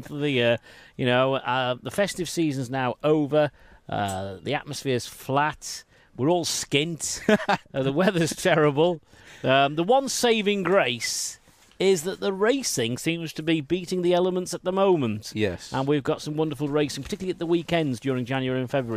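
No technical faults are audible.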